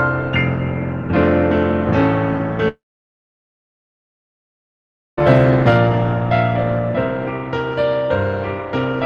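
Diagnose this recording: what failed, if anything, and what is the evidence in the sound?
At 2.68 s the sound smears into a short fading buzz or hiss, then falls silent for about 2.4 s until 5.19 s, resuming with that span gone. This is likely a long network dropout: concealment briefly extended the last audio, then stopped. The waveform shows a decaying tail then a flat line, and the spectrogram a blank gap.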